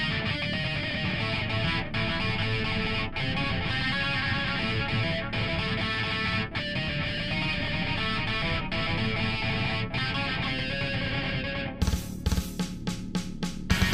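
No technical faults are audible.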